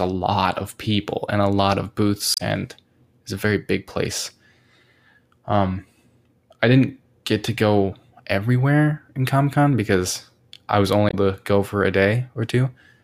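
At 2.34 s, just after "and a lot of", the speech breaks up until 2.41 s. This is damaged data in a compressed stream. Bytes in the coded stream are corrupt, so the decoder misreads those frames and loses sync. It then hunts for the next valid frame header. The same fault returns from 11.08 to 11.14 s, after "because I was" and before "to go".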